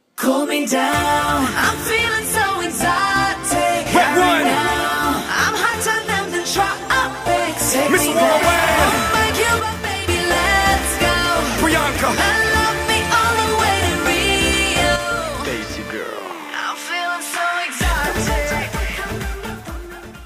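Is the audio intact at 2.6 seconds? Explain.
Yes, the audio is intact at 2.6 seconds, with no dropout, click, distortion or other fault at that moment.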